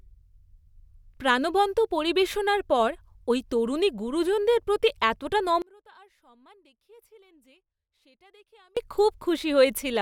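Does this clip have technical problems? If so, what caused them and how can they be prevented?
Yes. One channel inverted, from 5.62 to 8.77 s, just after "তরুণী গুরুজনদের প্রতি এতটা": the speech suddenly drops by about 32 dB and turns faint, as if nearly cancelled. That is what happens when the two stereo channels carry almost the same centred voice and one has its polarity flipped; summed to mono, the shared signal subtracts away, leaving only the small difference between sides. The likely cause is a polarity-reversed channel in that stretch of the signal path. To prevent it, check polarity across both channels and monitor in mono before release.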